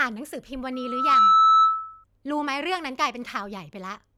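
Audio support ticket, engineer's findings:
Sharp single tone near 1.3 kHz swelling within about 0.4 s, 0.73–2.04 s, roughly 15 dB over speech. Loudspeaker feedback squeal: mic hearing its own speaker, loop gain above one.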